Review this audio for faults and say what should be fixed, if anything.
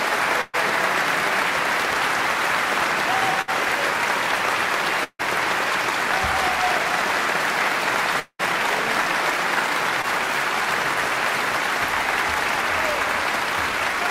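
Burst of packet loss at 0.41 to 0.55 s and again at 3.41 to 3.50 s. In each case a run of packets went missing or arrived too late, so the receiver kept extending the last sound and let it fade. That fill lasts about 120 ms in the first gap and about 62 ms in the second. The sound then picks up further along with that much audio gone. A larger jitter buffer and forward error correction would prevent this.

Long network dropout at 5.04 to 5.21 s and 8.19 to 8.41 s. Both times the last sound is stretched into a fading buzz or hiss, about 154 ms and 195 ms long. It then falls to silence for about 60 ms and 70 ms before the audio returns, with roughly 160 ms and 200 ms skipped. The likely cause is the incoming stream stalling entirely for that stretch rather than a few isolated packets failing. A more stable network path, with redundant transmission or retransmission, would prevent this.

Short concealed packet loss at 10.02 to 10.05 s. 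About 20 ms of audio never reached the decoder in time. The receiver patched the hole with roughly 17 ms of material continued from the preceding sound and then crossfaded back into the real signal. The result is a brief smear or wobble. Forward error correction or slightly deeper jitter buffering would prevent this.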